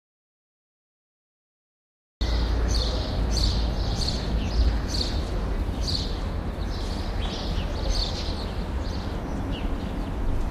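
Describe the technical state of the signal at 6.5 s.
At 6.5 s the audio is intact, with no technical fault audible at that moment.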